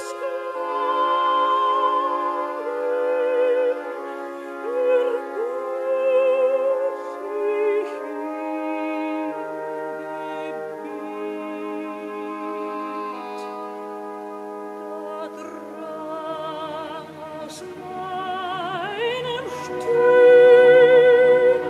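No technical faults can be heard anywhere in the audio. There is nothing that needs a timestamp or a fix.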